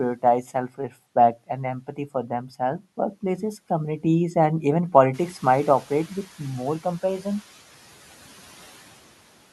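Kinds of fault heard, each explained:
Speech cut by the noise suppressor: the suppressor mistook some of the speech for background and pulled it down along with the noise. Between 0.43 and 0.93 s, just before "and empathy for", bits of the speech lose up to about 11 dB, adding up to roughly a sixth of a second of affected sound. Those moments come across thin and partly swallowed, as if the talker briefly backed off the mic.
Noise suppressor catching up: around 5 s the room noise jumps by about 12 dB, still sitting roughly 26 dB under the speech, and the suppressor's idea of the noise floor is left behind. Right after "workplaces communities and even", the louder background comes through with little reduction, then sinks by about 5 dB as the estimate adapts over 1.1 s, settling by "more compassion".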